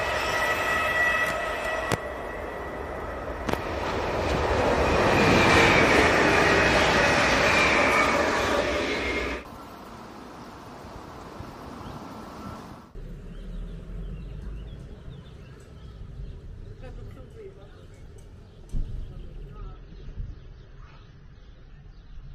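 From 19.57 s to the end at 22.35 s, the sound suddenly turns swirly with codec artefacts: an adaptive stream at a lower bitrate, which fits a step down from around 96 to 24 kbit/s AAC after the connection slowed. Unlike a dropout, there is no gap.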